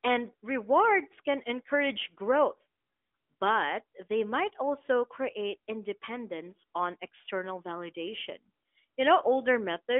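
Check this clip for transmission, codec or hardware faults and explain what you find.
No faults found.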